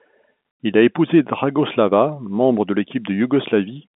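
Nothing stood out on listening to this speech, which carries the narrow band expected of G.711 telephone coding, with nothing above about 3.8 kHz.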